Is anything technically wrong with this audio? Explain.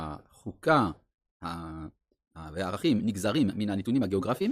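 Yes. From 1.3 s to the end of the clip there is a time-stretched section: the speech abruptly runs about 1.61 times faster while its pitch stays the same, so it sounds rushed. This is likely the work of software squeezing the audio to fit a shorter length by discarding short slices. On a spectrogram, harmonic spacing holds steady but syllable patterns compress horizontally, and the waveform shows tightly packed bursts with small seams where pieces were dropped.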